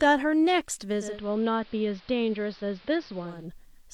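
A speech recording with a steady, even hiss running underneath from start to finish, sitting roughly 45 dB below the speech and carrying no distortion. That is low bit depth with dither: rounding to what sounds like about 10 bits, with dither added first, turns the error into constant white noise. From 0.91 s to 3.51 s the sound dulls. The level drops by about 3 dB and stronger hiss rises to roughly 25 dB below the speech. This is digital radio blending to analogue: the receiver lost its digital stream and cross-faded over about 312 ms to the AM broadcast, then faded back.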